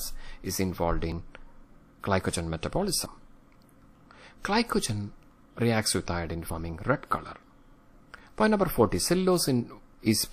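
At 1.12, 3.06, 6.5 and 8.4 s the sound jumps abruptly. A short stretch, a few tens of milliseconds, is missing without any gap. This is likely a dropped buffer (overrun).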